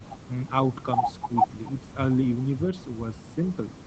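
Speech suppressed in double talk, from 0.44 to 0.49 s: the level dips by about 5 dB for roughly 50 ms and then recovers. The likely cause is an echo canceller that heard both ends of the call active at once and could not tell the near talker apart from the loudspeaker echo, so it briefly attenuated everything. Against the call path's 8 kHz band limit, the dip sounds like a short, shallow duck.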